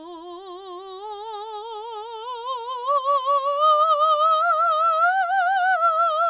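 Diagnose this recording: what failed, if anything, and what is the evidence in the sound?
Nothing failed in this music recording; the only thing to hear is the expected narrowband call path, with nothing above 4 kHz, as a G.711 A-law codec gives.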